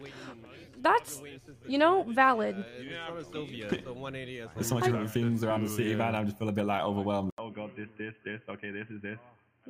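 At 7.30 s, an 80 ms gap precedes dull sound cut above 3.1 kHz, quieter, with new background noise. The likely cause is an input switched to a poorer device, since plain filtering would not add a gap or noise.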